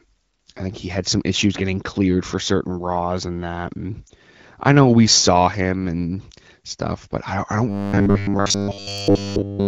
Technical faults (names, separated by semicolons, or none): lost AMR speech frames; robotic sound from repeated short buffers